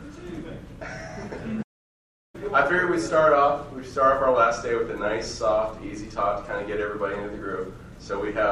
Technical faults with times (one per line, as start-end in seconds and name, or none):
1.62-2.35 playback stall